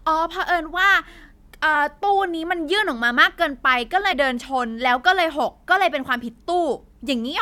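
Compressed frames skipped at 1.72–1.76 s and 4.11–4.13 s: whole frames go unplayed, so the speech jumps ahead about 50 ms.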